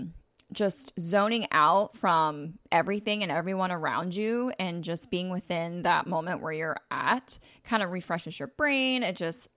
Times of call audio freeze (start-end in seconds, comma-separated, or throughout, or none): none